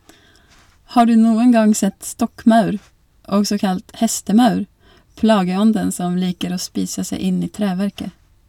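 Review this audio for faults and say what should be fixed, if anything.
Hard clipping: the signal exceeded a stage's ceiling by about 4 dB at 0.98–1.02 s, just before "du noen", and about 1 dB at 2.48 s, flattening peaks into brief crackle. Lowering the gain ahead of the overloaded stage to leave a few decibels of headroom would prevent it.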